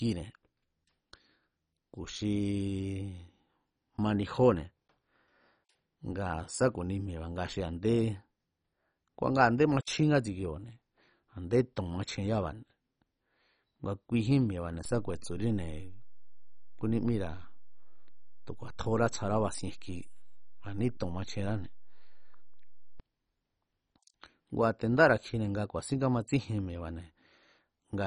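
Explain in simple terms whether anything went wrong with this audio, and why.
MP2 compression, throughout: the speech sounds dull and heavily gurgly, with nothing above about 10.4 kHz, likely because a low-rate MPEG Layer II encoder switched off its upper bands.

DC step, 14.85 to 23.0 s: the waveform's resting level suddenly shifts. The jump is heard as a low thump or click, while the speech carries on unchanged.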